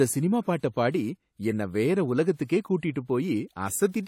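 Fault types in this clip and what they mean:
Transcoding between lossy codecs: the speech was likely compressed by one lossy codec and then re-encoded by a second, consistent with WMA followed by AAC-LC. The artefacts of both stages are heard together, and nothing remains above 17.8 kHz.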